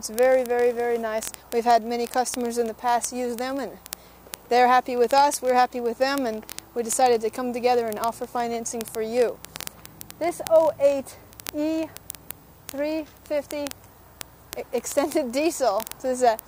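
Word clock ticks: the receiving device runs on its own clock, unlocked from the digital sender's and off by roughly a thousand parts per million, so a single sample is dropped or repeated about every 20 ms. From 0.12 s to 16.46 s, this puts several hundred steady ticks into the sound.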